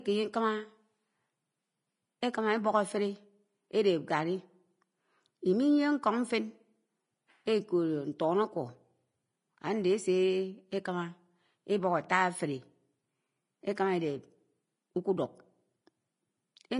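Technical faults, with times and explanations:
Throughout, Vorbis compression: the speech has a hissy, grainy top end, with sibilants smeared into a noisy wash and consonant onsets blurred rather than crisp. The damage is plainly audible, and it fits a low bitrate of around 29 kbps. At that rate the codec likely pulls its cut-off down and quantises the upper bands so coarsely that the fine detail is swapped for noise of similar energy, which roughens the tone of the voice.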